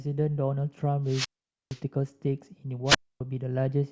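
Speech with two wireless microphone squelch dropouts, at 1.06–1.80 s and 2.86–3.21 s. The radio signal fades, and the receiver's squelch mutes the sound for about 0.47 s, then 0.26 s.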